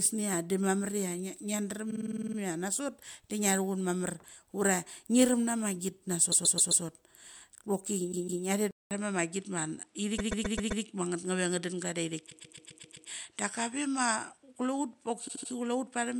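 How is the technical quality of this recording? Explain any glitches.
The recording has two kinds of fault: repeated frames throughout, and a switch to a poorer input partway through.

Repeated frames occur at 1.90–2.37 s, 6.31–6.83 s, 8.11–8.43 s, 10.18–10.83 s, 12.29–13.08 s and 15.27–15.51 s. A short block of compressed audio was played again and again. The blocks run about 52, 131, 157, 131, 131 and 78 ms. They repeat 9, 4, 2, 5, 6 and 3 extra times. Each one is heard as a stutter.

The input switched to a poorer device at 8.71 s, likely a change of microphone or headset profile. A 200 ms silence marks the switch. After it, nothing is heard above 11.4 kHz, so the speech turns duller. A new noise floor sits about 45 dB below the signal. Loudness stays about the same.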